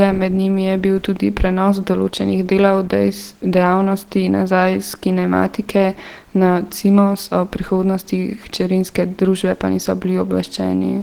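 The speech in this clip has most likely been through Opus compression at a very low bitrate, around 16 kbps, with the encoder in its hybrid speech mode throughout. That mode codes the lower band with a speech model and the upper band more coarsely, so the damage is plainly audible across the whole recording: the voice sounds muffled and hoarse, even though the bandwidth stays full and content reaches up to about 20.2 kHz.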